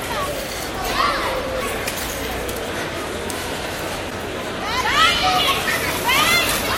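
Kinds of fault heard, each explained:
Broken MP3 bit reservoir: brief 28 ms glitches at 1.60 and 4.09 s, likely from frames reading another frame's bytes after a cut, fitting 24 ms frames.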